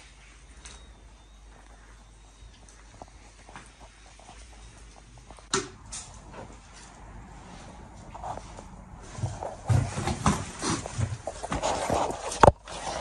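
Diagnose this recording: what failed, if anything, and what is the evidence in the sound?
The analogue wiring stage failed: a ground loop or a nearby transformer has coupled the 50 Hz power line into the signal path, producing mains hum. The evidence is a steady low tone at 50 Hz, with some low harmonics, present from the first moment to the end of the recording. It sits roughly 25 dB below the wanted signal.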